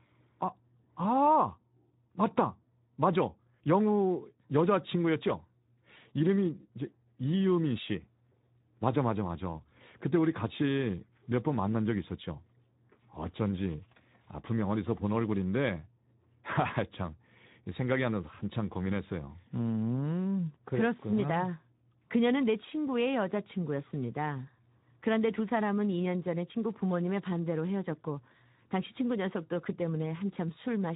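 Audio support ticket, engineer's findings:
Speex codec, whole clip; rate consistent with roughly 11 kbps. CELP excitation starved of bits, so speech comes out plainly noisy and hoarse. Band-limited: no content above 3.8 kHz, giving a muffled, narrowband tone.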